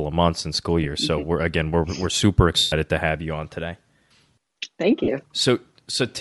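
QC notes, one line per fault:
Throughout: Bluetooth LC3 compression. The top end sounds thinned and replaced with hiss, giving the speech a breathy, grainy edge. This is likely the LE Audio codec, which swaps missing upper spectrum for noise fill, and fits a 48 kbps stream in 10 ms frames.
0.84–0.86 s, 2.58–2.73 s, 5.04–5.08 s: lost LE Audio frames. There are dropouts of 10, 140 and 40 ms, the first right after "of months and school" and the long one between "again we're we're super" and "to have you on". The decoder repeats the last spectrum with scrambled phase, so each gap becomes a noisy smear, and the 140 ms one fades away toward silence.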